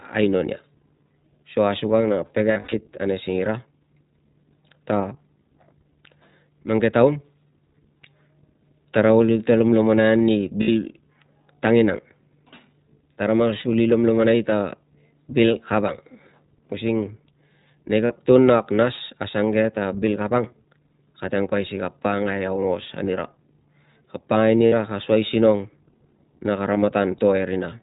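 The whole clip passes through the iLBC codec, a narrowband speech coder whose sound fits 15.2 kbps with 20 ms frames. Nothing above 4 kHz survives, so the speech is muffled and slightly rough and synthetic throughout, with plainly audible codec damage.

Lost iLBC frames occur at 2.52–2.74 s, 10.62–10.70 s, 13.60–13.63 s, 18.06–18.11 s, 24.66–24.74 s just before "ka soi", and 26.74–26.77 s. Packets went missing, and the decoder filled each gap by repeating the last pitch cycle mixed with noise. Each gap sounds like a brief held, buzzy or breathy vowel, and the speech recovers almost at once.

The first event spreads about 140 ms of loss over 200 ms, with the longest run at roughly 70 ms. The later gaps each last between 20 and 60 ms.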